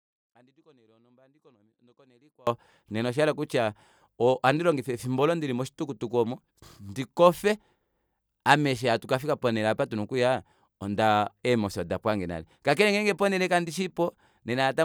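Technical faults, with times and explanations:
0.00–2.47 s, audio dropout to a faint residue: the clip opens already in the gap, with only a faint sound some 30 dB below normal, until full level snaps back just before "nena oshayela kutya ohandilongifa". The signal was likely cut upstream while the following path stayed live.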